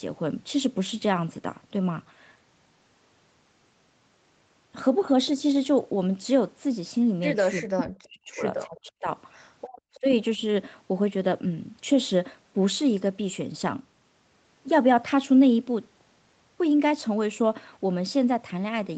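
From 7.62 to 8.44 s and again from 8.66 to 9.09 s, both ends of the call were most likely talking at once, and the echo canceller, unable to tell the local talker from the far-end echo, pulled the microphone signal down along with it. This is speech suppressed in double talk: the voice sinks by roughly 40 dB, close to vanishing, for most of the first stretch and almost all of the second, then comes back as the overlap ends.

At 9.68 to 9.72 s the canceller clamped the microphone while the loudspeaker was active, so the background is gated by the echo canceller. The room tone drops by about 32 dB for a brief 40 ms hole, then returns at once.

From 9.94 to 10.0 s there is an echo leak, likely because the canceller on a loudspeaker end failed to remove all of the far signal its microphone picked up and sent the rest back. A faint copy of the voice, delayed by 328 ms and sitting around 30 dB below the speech, is audible as a short scrap. 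Immediately after, from 10.0 to 10.07 s, speech is suppressed in double talk again, this time a shallower dip of roughly 20 dB lasting about 70 ms. Throughout, the audio carries the 8 kHz top end of the Opus call path.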